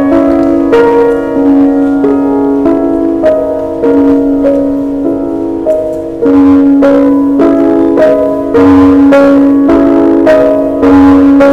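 Hard clipping runs through the whole clip. The signal is pushed roughly 11 dB past what the stage can pass, so around a tenth of the samples get their peaks sliced flat. Those flat tops throw harmonics way up high, giving a harsh fuzz on every loud moment.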